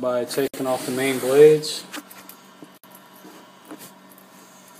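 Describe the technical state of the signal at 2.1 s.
At 2.1 s the signal is intact, with no dropout, distortion or other technical fault to be heard.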